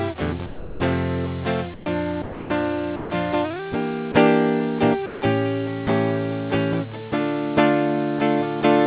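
Music passed through a call path whose sound stops at 4 kHz, which fits G.711 A-law at 64 kbps. The music itself vanishes into steady, featureless noise at 0.46–0.8, 2.22–2.5, 2.96–3.1, 4.12–4.14 and 5.06–5.22 s. This is sound dropped by the voice detector, likely because it mistook the music for background. Actual content goes missing, not just ambience. At 1.74–1.86 s, comfort noise replaces the background instead. Only a quiet stretch, about 22 dB below the loud parts, turns into smooth synthetic hiss at the same level, and no music is lost.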